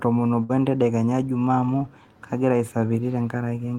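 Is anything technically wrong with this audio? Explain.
Yes. At 0.43 to 0.51 s there is a burst of packet loss. About 60 ms of speech went missing. The receiver stretched the last sound across the gap and faded it down. That gives a brief held buzz or hiss. The speech then jumps ahead.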